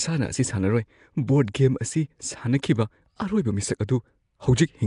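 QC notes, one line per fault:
throughout: Nellymoser compression. The speech carries a rough, hissy halo and a smeared, underwater quality. Nothing is heard above about 10.6 kHz. The damage is plainly audible. The likely cause is Flash's Nellymoser Asao codec, at a rate that fits around 44 kbps. It codes short fixed blocks with very few bits per sample. Weaker bands get no bits at all and are filled with noise. That noise fill gives the grainy hiss.
2.62 s: pre-echo. A short hiss, about 11 ms long, comes just before a sharp attack. The attack then sounds soft and smeared. The codec spreads its quantisation noise across a whole block. Here the attack falls late in a block. So noise sized for the loud onset also fills the quiet moment ahead of it. That gives the brief smear before the sound arrives.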